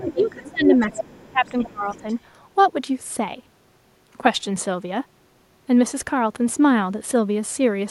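From the very start, a second, fainter voice sits under the talker: the other side's voice leaking through from 0.0 to 0.51 s and again from 0.69 to 1.19 s, roughly 15 dB below the main speech, then returning much more faintly from 1.45 to 1.7 s and from 1.9 to 2.15 s. These scraps are most likely loudspeaker playback reaching the microphone that the echo canceller failed to strip out fully.

Overlapping this, from 0.05 to 2.05 s, the talker's own speech repeatedly sinks, at worst by around 20 dB, for about a second and a half in total. This is speech suppressed in double talk: with both sides active together, the canceller likely could not tell the near talker from the returning echo and turned everything down.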